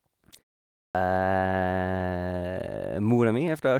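At 0.35 to 0.37 s a brief rough, noisier patch passes without any gap: a lost packet rebuilt from error correction, its 20 ms replaced by a low-bitrate copy from the following packet, which fits a single lost packet. At 0.86 s the sound jumps in abruptly after a half-second pause, missing its first 87 ms up to 0.95 s. That is a clipped start after a pause, with the output device still waking.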